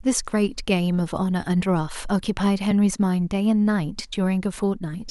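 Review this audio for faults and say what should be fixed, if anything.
At 2.71 s the speech drops into a block of digital silence roughly 1.8 ms long. It is heard as a tick, because the signal cuts to zero and back with no fade. The waveform shows a brief flat line at zero, and the spectrogram shows a thin broadband vertical stripe at each hard edge. A gap like this points to the output buffer not being filled in time. To prevent it, give the audio thread enough headroom or a larger buffer so every block is delivered before its deadline.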